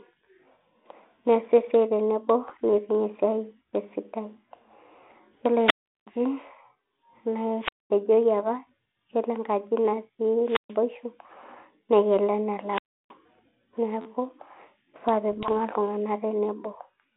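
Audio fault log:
2.49–2.60 s, 5.02–5.18 s and 15.31–15.52 s, bit errors on an ADPCM link: pops and short rough, grainy bursts with brief jumps in level. A sparse scatter of flipped bits disturbs the decoder's step size and predictor, so each error smears on for milliseconds rather than clicking once.
5.63–6.07 s, 7.59–7.91 s, 10.42–10.77 s and 12.66–13.14 s, wireless microphone squelch dropout: a brief swell of hiss, then near silence of about 370, 220, 130 and 320 ms respectively, and the speech returns, at 7.91 s with "apa yiolo enkaji". The FM radio link fades until the receiver's squelch mutes it.
14.01 s, repeated buffer: a short buzzy stutter lasting about 47 ms, where one chunk of roughly 12 ms plays five times over with a hard join at each repeat, which fits a 512-sample buffer replayed while fresh audio failed to arrive. The light G.726 grain of the 32 kbit/s narrowband path runs beneath all of these.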